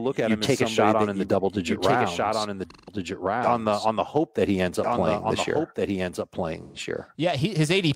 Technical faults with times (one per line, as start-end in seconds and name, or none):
0.00-7.96 doubled audio track
2.71-2.93 AAC frame loss with concealment
6.62-6.79 AAC frame loss with concealment